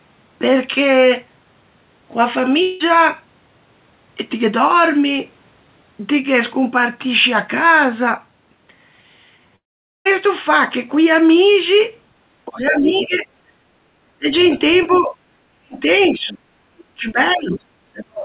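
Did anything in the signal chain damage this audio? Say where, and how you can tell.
Yes. At 2.62 s the sound breaks into a synthetic buzz that fills about 0.18 s before normal audio resumes. At 9.56 s a brief filled tail gives way to near silence until 10.07 s, about half a second lost. This is likely a long network dropout, with the receiver's concealment covering the gap.

From 12.45 to 13.26 s the talker's level sags by about 10 dB. From 14.11 s through to the end it falls away much harder, around 35 dB at its deepest. This is likely speech suppressed in double talk: the call processing's echo canceller cannot separate the near talker from loudspeaker echo and turns both down.

A second, quieter voice sits underneath at 12.57–13.17 s, about 15 dB below the talker, and again at 14.40–15.01 s and 15.98–16.09 s, roughly 20 dB down. This points to the other side's voice leaking through, residual loudspeaker echo the canceller left in the microphone signal.

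The room sound ducks by about 13 dB between 13.54 and 13.78 s, then recovers. This is background gated by the echo canceller, which clamps the microphone hard while the loudspeaker plays and releases it once that activity stops.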